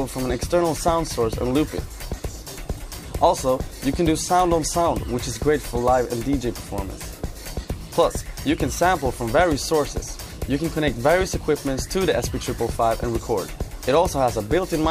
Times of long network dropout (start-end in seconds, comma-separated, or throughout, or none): none